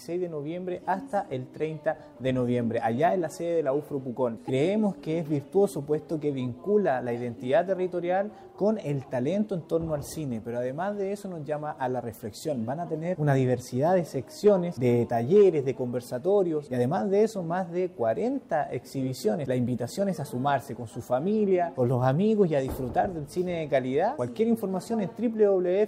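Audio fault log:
4.47–4.50 s, corrupt frame decoded: a brief burst of spurious energy, around 26 ms long, consistent with a couple of damaged compressed frames. Flipped bits in those frames left the decoder with wrong gain values or misread spectral codes, and it played them anyway, so energy lands at frequencies that bear no relation to the surrounding sound. The result is a short blip peaking at around -20 dBFS, cutting abruptly in and out at the frame boundaries.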